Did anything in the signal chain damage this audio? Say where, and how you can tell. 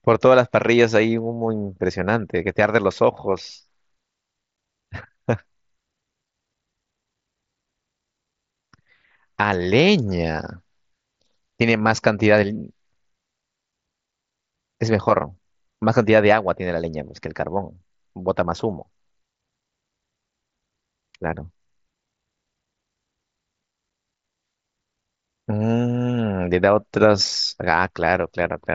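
Yes, the Bluetooth radio link. Unconcealed Bluetooth headset packet loss cuts abrupt silent gaps at 4.56 s (15 ms) and 23.90 s (7.5 ms), which points to dropped mSBC frames.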